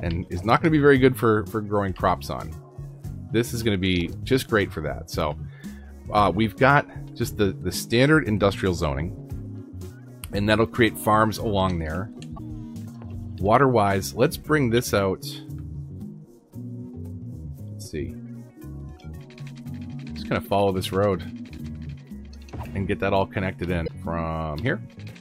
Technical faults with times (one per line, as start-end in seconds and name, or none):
12.34-12.40 damaged data in a compressed stream
21.54-21.60 damaged data in a compressed stream
23.84-23.89 damaged data in a compressed stream